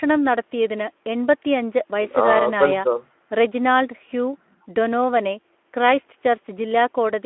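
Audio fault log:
Nothing stood out on listening to this speech clip.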